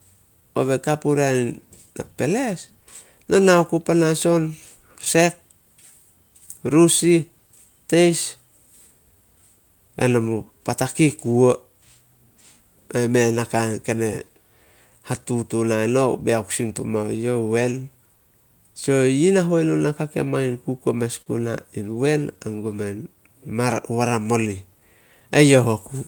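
A speech recording where the sender's clock runs about 4 percent slower than the receiver's, a clock drift between sender and receiver that keeps starving the jitter buffer throughout the clip. The receiver responds with repeated timing corrections from 0.14 s to 25.97 s, repeating small pieces so playback runs at 97 percent speed and gains about a second overall, with the small edits spaced unevenly. At 21.22 to 21.28 s a short stall from a late packet empties the buffer, so the receiver holds the last sound for 44 ms with nothing lost, giving a brief smeared hold.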